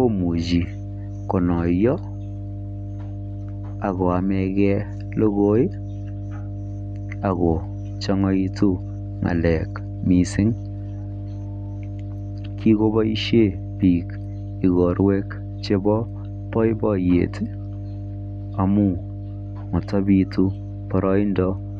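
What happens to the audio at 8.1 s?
At 8.1 s a steady low drone sits under the speech, a 50 Hz tone with a few low harmonics above it. It is fairly prominent, only roughly 10 dB below the speech itself. This is mains hum, and it runs through the whole clip rather than starting at this moment. A ground loop or a nearby transformer is coupling the 50 Hz power line into the signal path, adding that constant tone beneath everything recorded.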